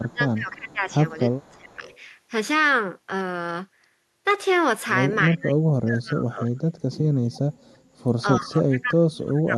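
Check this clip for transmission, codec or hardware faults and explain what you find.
Two echo-canceller faults are present: the speech repeatedly drops away during double talk, and a faint delayed echo leaks through twice.

Speech suppressed in double talk, at 0 to 0.91 s, 1.09 to 1.16 s, 1.36 to 1.82 s, 5.3 to 6.64 s and 8.22 to 9.55 s. The likely cause is an echo canceller that could not tell this talker from loudspeaker echo while both ends spoke, so it attenuated everything. The speech dips, from a slight fall near 1.1 s to drops of around 35 to 40 dB in the last two stretches, where it nearly vanishes.

Echo leak, at 1.84 to 2.0 s and 7.34 to 7.39 s. A loudspeaker-side canceller failed to remove all of the pickup, which likely sent a residue back. It is heard as a brief, faint repeat of the speech about 0.3 s behind the original and roughly 25 dB quieter.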